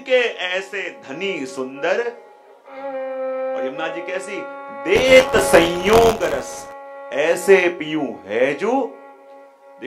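From 4.95 to 6.72 s the sound takes on a rattling, robotic buzz at about 86.1 Hz. This is buffer tearing. The writing side and the reading side of the playback buffer have drifted out of step. They now cross inside every period. A small slice of each buffer replays audio from roughly 20 ms earlier. Hard joins sit on both sides of that slice. The buzz rate fits a 512-sample buffer.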